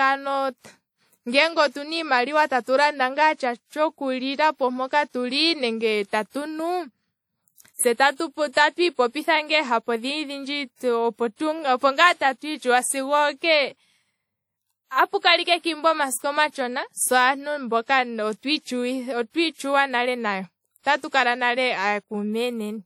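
WMA compression runs through the whole speech clip, with plainly audible damage from start to finish. The sound is likely a low-bitrate WMA encode, fitting a rate of around 48 kbps. The transform codec works on long blocks, so quantisation noise smears over tens of milliseconds around each sound, and weaker spectral lines are dropped. The result is a ringing, washy texture and a hiss that swells and fades with the speech, while the band still extends to about 20.1 kHz.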